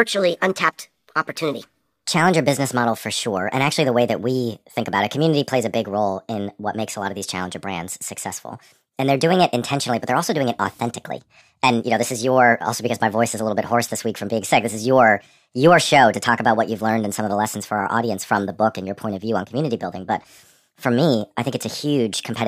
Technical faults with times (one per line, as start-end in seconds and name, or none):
0.00-22.48 wrong sample rate